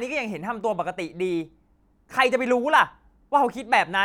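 Nothing stood out on listening to this recording.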